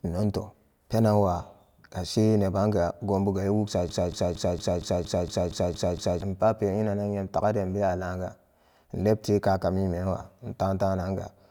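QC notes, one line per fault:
3.89–6.22 s: broken-record loop, a 0.23 s slice of speech repeats ten times back to back; likely a stalled player or stream resending its last fragment.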